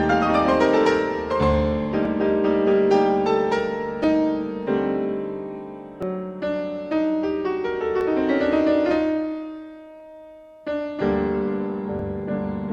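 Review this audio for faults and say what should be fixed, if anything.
Small clicks or skips at 2.05, 4.04, 6.03, 8.01, 10.0 and 11.99 s. This is overlap between stream segments: overlapping timestamps on the 2-second segments make the player trim a few milliseconds. Fix it by aligning segment timestamps exactly at each 2-second boundary so that no audio is discarded.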